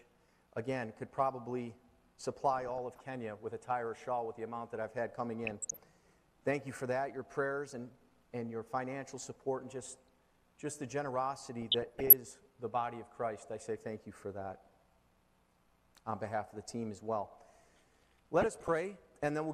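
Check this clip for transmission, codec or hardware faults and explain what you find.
The clip has DAB burbling in five short bursts: 2.53–3.02 s, 5.43–5.79 s, 9.82–10.21 s, 11.59–12.13 s and 18.41–18.68 s. In each, bit errors slip past error correction into the MP2 data at a rate of a fraction of a percent. Corrupted samples put short blips of noise in single sub-bands, and corrupted scale factors make individual sub-bands leap in level for up to a frame. Unlike a dropout, the burbling does not silence the sound. It keeps running but churns underneath.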